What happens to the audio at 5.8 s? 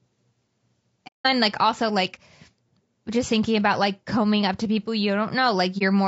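At 5.79 s a coded frame went missing and the decoder replaced its spectrum with silence. The overlapping low-delay windows on either side taper the signal down and back up rather than cutting it off. The result is a brief dip in the speech lasting about 30 ms, to 5.82 s, which fits a single lost frame. This is AAC frame loss with muting, a soft-edged gap rather than a hard break.

Underneath that gap, and across the whole clip, the speech carries plainly audible coding damage. This is most likely low-delay AAC compression of the AAC-ELD kind used in video calls. The rough, grainy texture, with noise filling in between the harmonics, points to a bitrate around 32 kbps. At that rate the encoder cannot spend enough bits on each frame's frequency lines to keep the voice clean.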